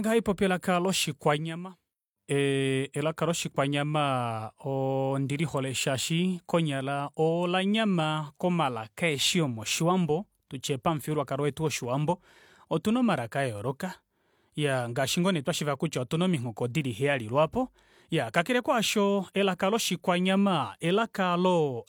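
Nothing here stands out as a technical problem; it's a speech recording with no faults to point to at any moment.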